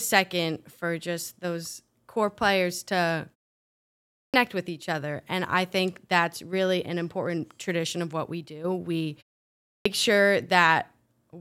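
At 4.23 and 9.75 s, clipped start after a pause: the output wakes late after pauses of 0.96 and 0.61 s, losing about 0.1 s of onset. Unlike muted pauses, actual speech is cut.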